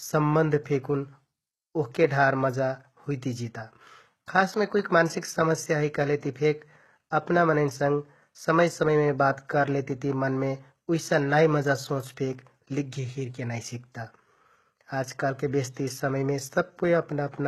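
HE-AAC compression runs through the whole of this speech recording: nothing is present above 12.3 kHz, and the treble sounds rebuilt rather than captured, with s sounds turning gritty and metallic, likely from band replication copying lower bands upward at a rate near 16 kbps.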